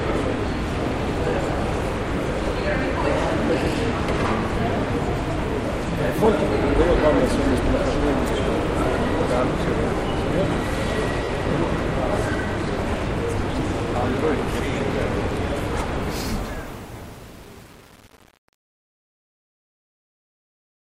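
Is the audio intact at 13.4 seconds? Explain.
No. At 13.42 s there are lost LE Audio frames: about 10 ms went missing, and the LC3 decoder refilled the gap by repeating the previous spectrum with scrambled signs. It is heard as a tiny noisy smear. A spectrogram shows a thin blurred vertical strip, and the waveform shows a short noise-like patch with no dropout to silence.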